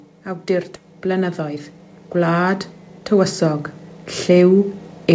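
Speech carried over a call connection, band-limited to nothing above 8 kHz, which fits a wideband call codec such as G.722. The first fault is automatic gain rising from 0.25 s to 3.73 s. The gain control judged the input too quiet and raised its gain step by step, by about 10 dB across that span. The voice and the background noise swell together, not the speech alone, which points to a level control acting on the whole signal rather than any change at the source. Inside that rise there is a skip ahead at 0.76 to 0.78 s. Roughly 0.4 s of audio is missing, and the two sides are butted together with no fill, so the speech jumps forward abruptly. That pattern means a block was dropped while later packets were already queued, likely because the jitter buffer overflowed, and the playout delay shortened by about the same amount. From 1.40 s to 1.78 s there is a jitter buffer speed-up. The buffer was holding more audio than its target, so the receiver cut out short pitch-period-length pieces many times in a row, around 70 ms in total. 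Playback runs at about 113 % speed while the pitch stays unchanged, so this stretch of speech sounds briefly hurried.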